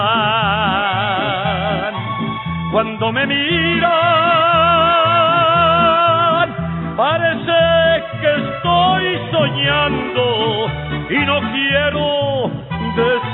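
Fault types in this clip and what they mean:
No technical faults are audible anywhere in the audio.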